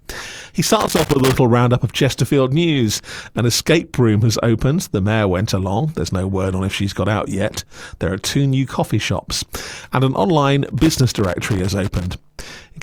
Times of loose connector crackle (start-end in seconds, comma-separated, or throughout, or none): 0.67-1.37, 10.66-12.19